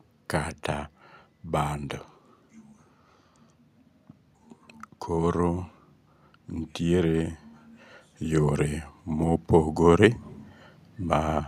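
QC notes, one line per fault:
8.21–10.2 s, automatic gain rising. The gain control judged the speech input too quiet and turned its gain up slowly, by about 3 dB over two seconds. The voice and the background noise swell together, because the whole signal is boosted, not just the voice.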